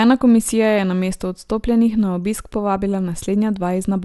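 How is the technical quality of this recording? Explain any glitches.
The quality is degraded throughout by generation loss. Across the whole clip the speech sounds swirly, hollow and smeared. Attacks are blurred. Nothing is heard above 11.9 kHz. The likely cause is about three rounds of lossy encoding, which fits MP2 at 96 kbit/s. Each round requantises on a shifted frame grid, so noise and spectral gaps build up.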